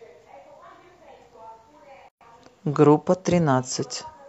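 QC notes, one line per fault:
2.09–2.21 s, gap at a join of encoded pieces. Speech stops for 123 ms, then resumes. Untrimmed encoder padding sits at the join.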